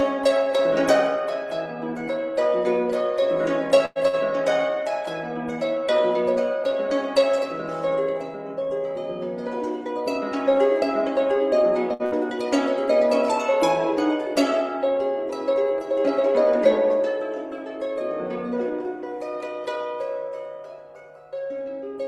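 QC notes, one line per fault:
3.85–3.98 s, burst of packet loss: a gap of about 100 ms is filled by continuing the last sound and fading it down, ending in 10 ms of silence. Playback resumes with 60 ms of audio missing. Timing now runs 41 ms later.
4.07–4.20 s, short stall from a late packet: the jitter buffer runs empty, so the last sound is stretched for 55 ms until the packet arrives. Playback then continues from the same place. Nothing is lost, but 9 ms of audio is removed.
11.93–12.02 s and 12.05–12.14 s, burst of packet loss, twice: each gap is filled for 60 ms with the previous sound, continued and faded. Each time, 60 ms of audio is skipped. The two gaps are 30 ms apart.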